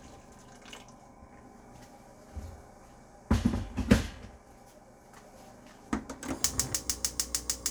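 No technical faults can be heard in this sound recording.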